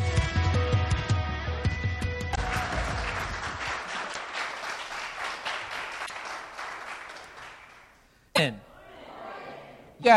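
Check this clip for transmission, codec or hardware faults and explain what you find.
Damaged data in a compressed stream is present, at 2.31–2.38, 4.09–4.17, 6.02–6.11, 8.32–8.39 and 9.99–10.05 s. Corrupted bytes make the decoder misread frames and hunt for the next header, giving brief chirps, squawks, clicks or short holes of about 55–85 ms.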